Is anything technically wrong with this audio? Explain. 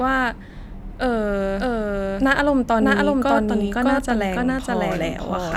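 Yes. A doubled audio track runs throughout this speech: a second full-band copy trails the original by roughly 0.7 s at about equal level, most likely from a slower second capture path. It has no decay or room colour, so every phrase is repeated as a flat, overlapping echo.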